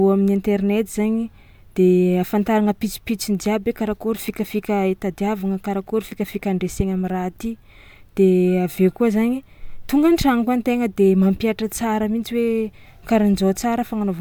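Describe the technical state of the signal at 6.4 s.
At 6.4 s the speech signal is intact, with no technical fault present at that point.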